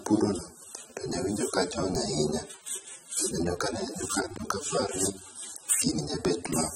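The speech sounds dull and smeared throughout, with nothing above 16.5 kHz. This is likely AAC compression at a low bitrate, around 24 kbps.

From 3.45 to 4.50 s, processor overload crackle tears through the sound. Dozens of roughly 5 ms buffers arrive late, each leaving a hard-edged silent gap.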